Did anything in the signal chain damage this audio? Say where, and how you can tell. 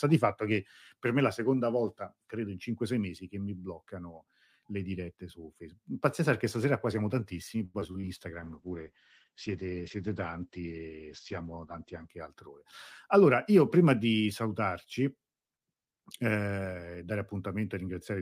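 Yes. The first damage is in the network stage: repeated packet loss, heard as robotic sound. It runs from 7.65 to 8.07 s, just after "stasera qua siamo tantissimi". Five short holes open in quick succession, the longest about 88 ms. The receiver covers each one by stretching the last bit of sound, so about 37% of that stretch is synthetic fill. That is why it turns choppy and robotic, with pieces missing.

The second fault is a call bitrate drop, which sits between the network and the codec. From 8.42 to 12.16 s, the top of the spectrum collapses from a full 20 kHz to about 8 kHz, and the sound turns coarse and muffled. The bandwidth estimate fell, and the encoder was told to spend far fewer bits. The sound points to a fall from about 64 kbps to about 11 kbps. It stays at the floor for about 3.7 s.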